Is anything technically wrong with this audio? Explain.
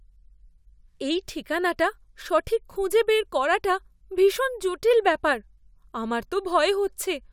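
No, nothing technically wrong can be heard in this speech recording.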